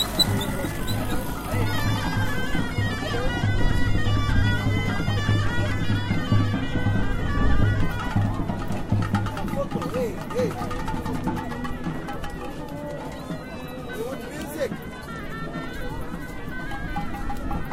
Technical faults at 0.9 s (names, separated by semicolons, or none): none